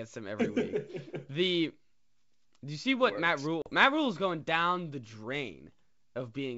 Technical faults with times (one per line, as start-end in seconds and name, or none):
3.62-3.70 packet loss on an ADPCM call